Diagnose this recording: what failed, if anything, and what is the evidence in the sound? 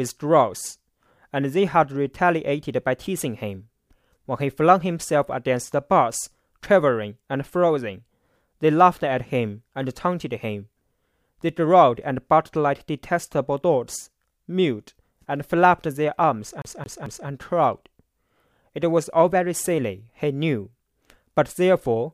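CD stuck on one turn, at the playback stage. From 16.62 to 17.28 s, the same 221 ms of speech repeats three times. A short mute marks each laser jump back.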